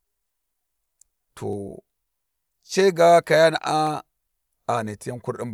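At 3.87 s a single sharp click cuts through the speech, showing as a thin vertical line across the spectrum. This is likely dropped samples: a fraction of a millisecond of the stream went missing, so the waveform jumped abruptly to a later value.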